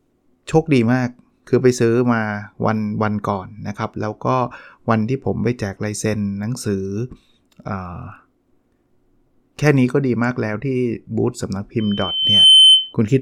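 A microphone is picking up the loudspeaker it feeds, and at 3.1 kHz the loop gain passes one, producing loudspeaker feedback squeal from 11.79 to 12.94 s. A thin tone swells over a little under a second into a piercing squeal about 10 dB above the speech.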